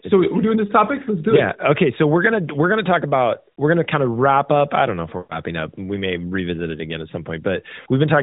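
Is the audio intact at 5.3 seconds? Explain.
No. Just after "I don't know if", lost AMR speech frames disrupt 5.18 to 5.40 s. The decoder replays the last good pitch and vocal tract settings with falling gain, so the sound smears, drones, then fades. A spectrogram shows frozen, flat harmonics thinning to a faint gap.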